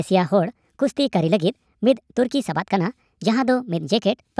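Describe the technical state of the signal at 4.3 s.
At 4.3 s the wrong sample rate fault is still present, as it is throughout the clip. The audio is played back about 1.38 times faster than it was captured, with no conversion, which fits 16 kHz material run at 22 kHz. Speech sounds hurried and raised by about 5.55 semitones.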